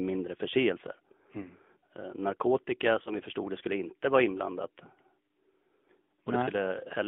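AMR narrowband mobile codec damage runs through the whole speech clip. The band is confined to roughly 200 Hz to 3.5 kHz, and the pulse-driven vocal tract model leaves a plainly buzzy, synthetic edge, which fits AMR-NB at around 10.2 kbps.

Lost AMR speech frames occur twice, at 1.42 to 1.46 s and at 3.04 to 3.11 s, just before "vi förstod det skulle". Each is a single 20 ms frame that failed its checksum. The decoder repeated the previous pitch and vocal tract settings at reduced gain, giving a brief dip or warble before the voice resumes.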